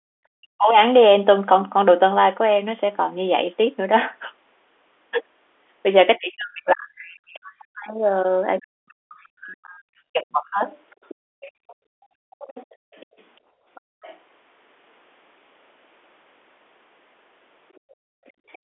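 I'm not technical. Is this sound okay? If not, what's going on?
No. There are three echo-canceller problems in this speech.

Background gated by the echo canceller: the room sound suddenly drops out from 0 to 0.09 s, 11.15 to 14.01 s, and 17.8 s to the end, because the canceller shut the microphone down hard.

Speech suppressed in double talk: the voice dips and breaks up from 0.37 to 0.78 s and 6.18 to 10.63 s, likely because both sides talked at once and the canceller turned this voice down along with the echo.

Other side's voice leaking through: a faint second voice comes through from 8.59 to 9.27 s, 10.7 to 14.17 s, and 17.75 to 18.58 s, likely the far end's loudspeaker sound that the canceller didn't fully remove.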